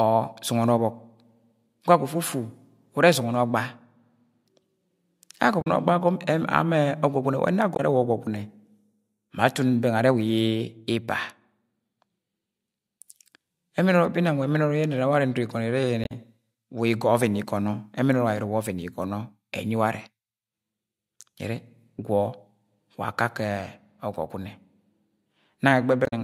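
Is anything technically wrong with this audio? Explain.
Yes. The speech shows damaged data in a compressed stream at 5.58–5.67 s, 7.72–7.80 s, 16.01–16.12 s and 26.03–26.13 s. Corrupted bytes make the decoder misread frames and lose sync while it hunts for the next valid header. Each spot is a brief chirp, squawk, click or short hole.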